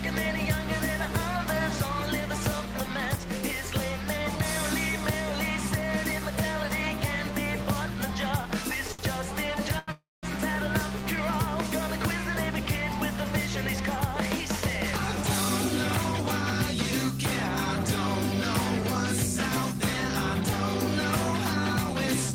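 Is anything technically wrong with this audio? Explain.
Yes. Two short stalls from a late packet, at 8.93 to 9.01 s and 9.79 to 9.90 s, hold the last sound for 60 and 88 ms before resuming intact. Unlike a freeze, they never fall silent.

A call audio freeze follows at 9.92 to 10.25 s: a 313 ms insert whose held sound fades to about 200 ms of silence, then resumes with nothing lost, likely from delayed packets emptying the jitter buffer.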